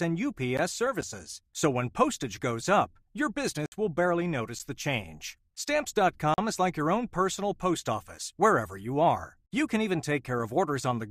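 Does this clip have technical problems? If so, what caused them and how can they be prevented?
Yes. There are gap between stream segments faults at 0.57 s and 4.59 s, about 4 s apart, each a hard-edged hole of roughly 12 to 14 ms. Adjacent segment timestamps don't quite meet, so the player pads the gap with silence, though no speech is actually lost. Making each segment's timestamps butt exactly against the next should stop these.

There are also blocks of digital silence: a tick at 1.01 s and short holes at 3.66–3.72 s (60 ms) and 6.34–6.38 s (40 ms). The sound cuts out and back with no fade, most likely because the output buffer wasn't filled in time. A larger buffer or higher audio-thread priority should prevent them.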